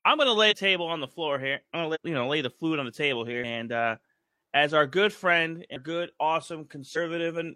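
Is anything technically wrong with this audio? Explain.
Yes: compressed frames are skipped at 0.47–0.53, 1.91–1.97, 5.72–5.78 and 6.92–6.98 s. At each point the speech jumps ahead by whole 46.4 ms frames, losing roughly half a second at most.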